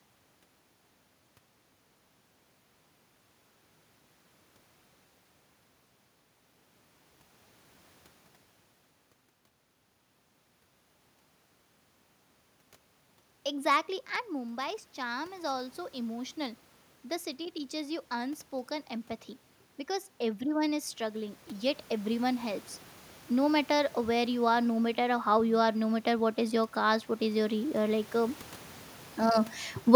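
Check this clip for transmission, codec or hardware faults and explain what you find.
Automatic gain rising occurs twice in this speech. From 14.3 to 16.41 s, after the talker moves back at around 14 s and the input falls about 11 dB, the gain control lifts its gain by about 4 dB. From 19.86 to 22.52 s it adds about 5 dB more. Voice and room noise swell together over two to three seconds each time.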